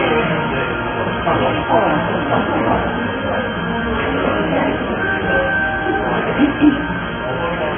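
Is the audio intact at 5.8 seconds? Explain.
No. At 5.8 s the sound is dull and smeared with a warbling, fizzy texture and nothing above 3.4 kHz, likely from heavy AAC compression at a bitrate around 16 kbps.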